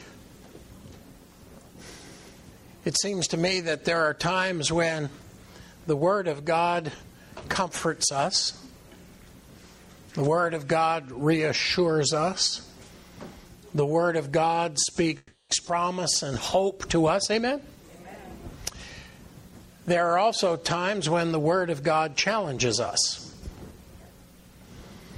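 A call audio freeze runs from 15.17 to 15.51 s. The audio stalls, and the last sound is stretched into a fading buzz for about 320 ms before a brief drop to silence. The likely cause is held-up packets leaving the jitter buffer empty, so the receiver invents sound to cover the wait. Nothing is lost. Playback resumes exactly where it stopped, and the whole stream now runs about 320 ms later.

A skip ahead follows at 15.65 to 15.68 s. Playback jumps forward with almost no gap, only about 10 ms of filler at the join. Roughly a fifth of a second of audio is gone, and the material on either side is spliced nearly directly. A stretch was dropped, pulling the delay back by around 150 ms.

A jitter buffer speed-up from 17.35 to 18.00 s makes the audio run about 12% fast at unchanged pitch. A second, gentler one from 18.57 to 19.67 s runs about 6% fast. The buffer still held more audio than its target, so the receiver repeatedly trimmed slivers of one or a few pitch periods. 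Each speed-up removes roughly 70 ms and leaves the sound briefly hurried.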